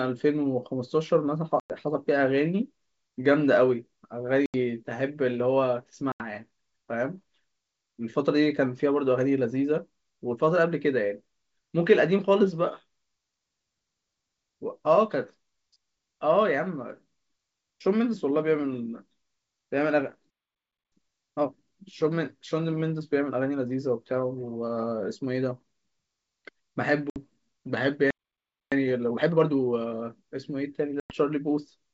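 Speech over a wideband telephone link, clear up to about 7 kHz with a faint upper-band hiss, shows packet loss on an ADPCM call at 1.60, 4.46, 6.12, 27.10 and 31.00 s. Each is a hard-edged hole of 60 to 100 ms. Because the decoder's predictor and step size lose track of the sender's, the speech returns slightly distorted before settling. That rough re-entry separates these holes from the two playback stalls at 20.30 to 20.92 s and 28.11 to 28.72 s. These are longer silences of about 0.6 s that break off the speech in mid-flow, and the likely cause is the player running out of data or being blocked. Each stall is followed by time-compressed catch-up, at 2× from 20.92 to 21.54 s and at 1.5× from 28.72 to 29.94 s. The speech is hurried but keeps its normal pitch, unlike a simple speed-up that would raise the pitch.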